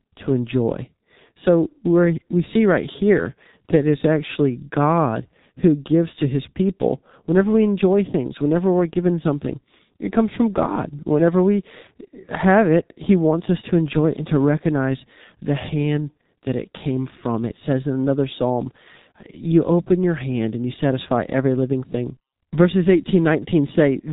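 From start to finish, the speech carries heavy G.723.1 codec damage. Nothing survives above 3.8 kHz, so the top of the spectrum is simply gone. The voice sounds muffled and hoarse. Consonants smear together, since the codec's model of the voice updates only once per long frame and cannot follow fast changes. The coarseness points to a very low bitrate, which fits the 6.3 kbit/s mode of this early internet-telephony codec.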